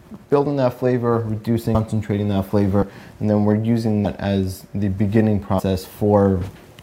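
Compressed frames are skipped at 1.74, 2.81, 4.04 and 5.58 s. The audio jumps ahead by roughly 200, 70, 150 and 100 ms, which fits whole 26.1 ms frames being dropped. Overlapping frames smear each join into a brief blip, not a click.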